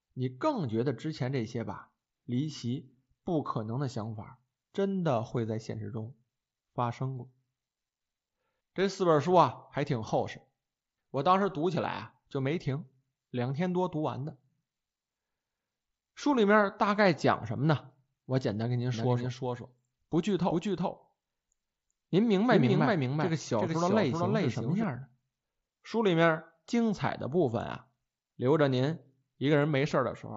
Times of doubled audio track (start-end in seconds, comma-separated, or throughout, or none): 18.94-24.84